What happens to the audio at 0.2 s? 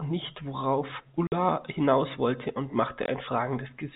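Nothing goes wrong at 0.2 s: the speech continues intact there, carried through the telephone-band G.711 path with its usual 4 kHz ceiling and nothing interrupting it.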